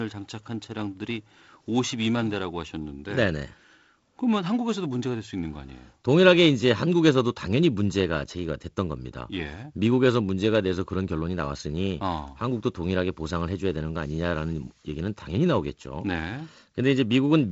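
No faults are audible anywhere in this speech recording.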